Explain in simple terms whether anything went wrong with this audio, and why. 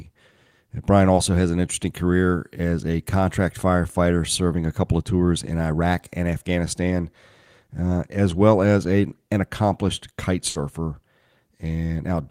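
Two things went wrong. At about 1.15 to 1.19 s there was a short concealed packet loss: about 20 ms of the call arrived too late, and the receiver filled the gap by extending the sound just before it. You hear a tiny smear or wobble, and a brief sound can disappear.

From about 10.49 to 10.57 s there was a burst of packet loss: about 60 ms of audio was lost. The receiver stretched the last sound across the gap and faded it down, then jumped ahead, so a piece of the speech is simply missing.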